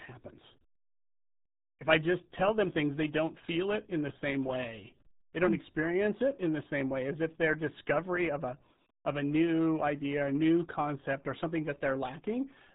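A speech clip carrying heavy RealAudio 14.4 codec damage from start to finish. The voice sounds muffled and gargly, which fits the RealAudio 1 (14.4) coder running at roughly 8 kbit/s for dial-up delivery. On a spectrogram the energy stops at a flat ceiling near 3.9 kHz with nothing above it, and the harmonics below look blotchy and frame-quantised. The waveform stays intact in level but loses its fine detail.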